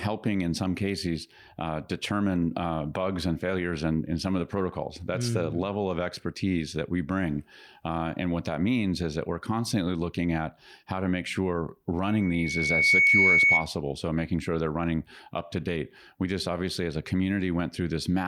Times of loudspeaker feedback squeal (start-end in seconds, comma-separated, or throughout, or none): 12.07-13.67